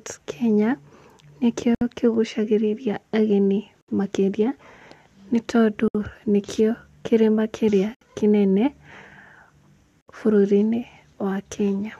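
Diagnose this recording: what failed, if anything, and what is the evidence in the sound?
The failure is at the codec stage: gaps at the joins of encoded pieces. The speech drops to silence for about 67 ms at 1.75, 3.81, 5.88, 7.95 and 10.01 s, every 2.0 s. The first gap comes just before "kĩgucagĩrĩria ageni makĩria". Others follow "nĩkĩo kĩgucagĩrĩria ageni" and "nĩ tondũ". The codec smears the edges of each gap. The speech resumes where it stopped. Each 2-second piece was encoded separately and joined untrimmed, so the encoder's start delay and last-frame padding remain.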